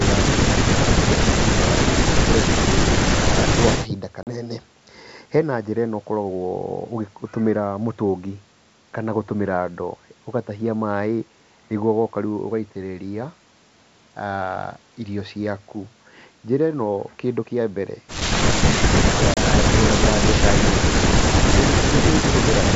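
Packets went missing on this ADPCM call at 4.23 to 4.28 s (about 40 ms, a few packets) and at 19.34 to 19.37 s (about 30 ms). The gaps were filled with silence, and the receiving decoder's adaptive predictor and step size drifted away from the sender's. Each loss is heard as an abrupt hole in the speech, and the sound resumes with brief, slight distortion before settling. The G.722 wideband coding holds its clear, wide band throughout.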